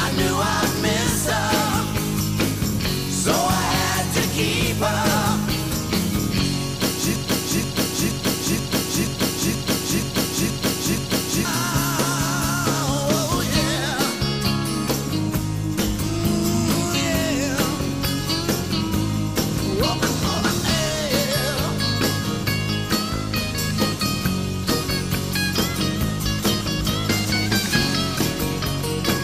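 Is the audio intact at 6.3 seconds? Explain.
Yes, at 6.3 seconds the audio plays through cleanly with no dropout, click, distortion or other fault.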